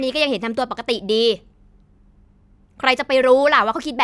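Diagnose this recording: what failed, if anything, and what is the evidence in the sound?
Nothing failed at any stage of the chain: the speech carries no audible defect, so there is no evidence to point to and no mechanism to diagnose.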